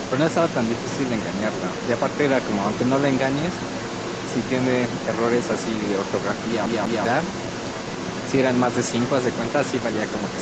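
From the very start to the end of the clip, a second voice sits underneath the main speech, roughly 10 dB quieter. It sounds like the other side's voice leaking through: the far end was likely played on the talker's loudspeaker and only partly removed by the echo canceller. On a spectrogram it shows as fainter, overlapping harmonic patterns that don't line up with the main talker's.

Between 6.66 and 7.05 s, the audio behaves like a CD stuck on one turn. The same slice of about 0.2 s (196.6 ms) plays twice in a row, each jump marked by a brief mute. It is a quick, mechanical stutter rather than a natural repetition. In the waveform, identical blocks repeat back to back, separated by short flat gaps. On a spectrogram, the same pattern repeats at a regular 0.2 s spacing, with thin vertical dropouts at each seam. Throughout, the spectrogram shows nothing above 8 kHz, consistent with the call's microphone processing and codec.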